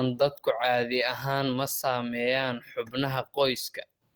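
No technical faults are audible.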